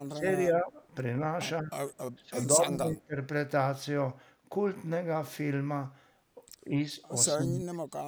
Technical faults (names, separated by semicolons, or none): speech suppressed in double talk